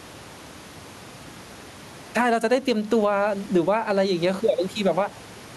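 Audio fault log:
throughout gain pumping: The input gain is likely set far too high for the microphone, so a fast limiter clamps down on every loud stretch of speech and releases in the pauses. The level swings by around 10 dB. The room noise sits about 30 dB below the speech. Loud and quiet passages are pressed close together, and the speech sounds squashed.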